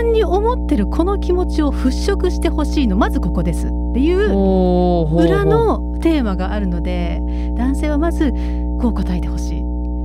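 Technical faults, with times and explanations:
Throughout: mains hum at 60 Hz, roughly as loud as the speech, from power-line current leaking into the signal path through a ground loop or nearby transformer. A spectrogram shows a steady horizontal line at 60 Hz with some low harmonics, and the waveform carries a constant low ripple beneath the speech.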